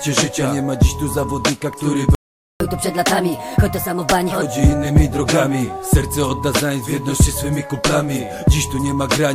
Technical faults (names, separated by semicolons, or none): playback stall; catch-up at higher speed